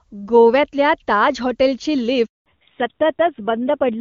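At 2.26 s, right after "गोव्यातल्या ताज हॉटेलची", the voice cuts off almost instantly and the line goes completely silent for 200 ms, until 2.46 s. This is a handover gap. The call was passed from one network to another, and while the link switched over, no speech frames reached the receiver. Anything spoken during that fifth of a second is simply gone, not muffled or garbled.

When the sound returns at 2.46 s, it is duller and rougher. Sibilants and breathy detail lose their edge, and nothing remains above 4 kHz through to the end. This is a fallback to narrowband. Before the gap, the call was carried as HD Voice by the AMR wideband codec and sounded clean, which fits a high AMR-WB rate. After the switch, it continued on a narrowband AMR codec, and the low-rate coding behind that change, consistent with around 7.4 kbit/s, adds the coarse texture.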